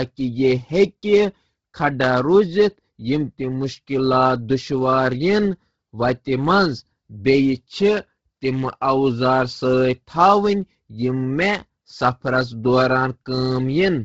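From start to finish, the speech has a breathy, grainy edge, and nothing sounds above 7.7 kHz. The likely cause is Bluetooth LC3 compression. This transform codec codes sound in short blocks, here consistent with 10 ms frames. At a low bitrate, which fits about 16 kbps, it drops much of the upper spectrum. It then fills the gaps with shaped noise. That substitution gives the heavy, hissy texture on the voice.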